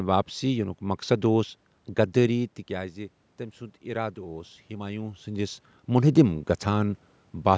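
Speech, with automatic gain rising from 2.68 to 5.66 s. The talker moves around 2 s and the input falls by about 12 dB. The gain control then slowly raises its gain by about 4 dB, so the voice and the room noise swell together.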